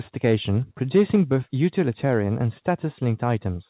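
Harsh, crackly distortion lands on the loudest parts of this speech recording at 0.24–0.35 s, 0.95–1.36 s, 2.05–2.14 s and 3.28–3.33 s, with the peak tops audibly flattened. This is likely microphone overload: the input level pushed peaks past the converter's ceiling by about 4 dB, about 3 dB, and about 1 dB in the last two bursts, squaring off a few percent of samples and adding that rasp. Partway through the longest distorted stretch, at 1.16 s, the whole level, voice and background alike, drops abruptly by about 2 dB. That is most likely the microphone volume being stepped down, as call software cuts the device's input gain in a single move after detecting clipping. The overloads after that step are milder, though they still clip. Throughout, the sound is capped at 4 kHz, which fits a narrowband G.711-style call path.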